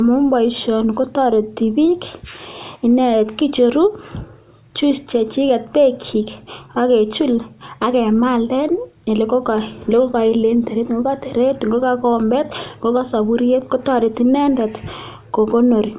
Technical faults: none

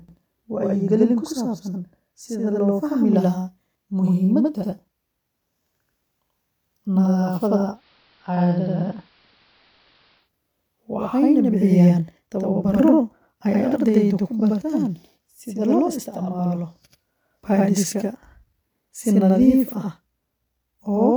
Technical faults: channel delay (doubling); digital radio blending to analogue

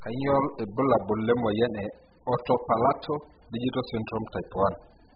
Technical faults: AAC compression

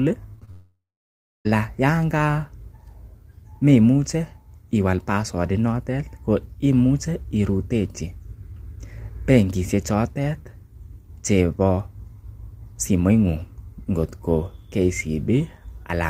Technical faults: short concealed packet loss; long network dropout

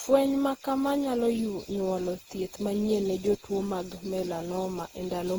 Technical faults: generation loss

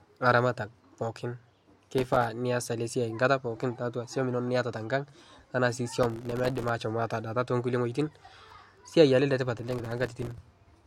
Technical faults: processor overload crackle

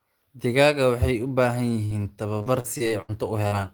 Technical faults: burst of packet loss; repeated packet loss (robotic sound); short concealed packet loss

